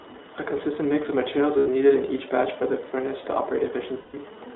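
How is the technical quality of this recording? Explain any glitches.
Technical quality is limited. The whole recording has gone through a narrowband VoIP codec, and it drops out twice.

The iLBC codec coloring runs from start to finish. The band sits between roughly 250 Hz and 3.7 kHz, so there's no real low end and nothing airy up top. The speech stays clear but has a rough, slightly synthetic edge. That comes from iLBC coding each frame's excitation on its own, and the grit fits its 15.2 kbps mode with 20 ms frames.

There are lost iLBC frames at 1.58 to 1.68 s, about 80 ms, and again at 4.00 to 4.16 s, about 140 ms. The first fits four missing frames and the second seven. When packets go missing, the decoder fills the hole by repeating the last pitch cycle with some noise mixed in. What you hear is a brief held, buzzy-breathy vowel, longer and fading on the second one, and then the speech snaps right back because iLBC frames don't depend on each other.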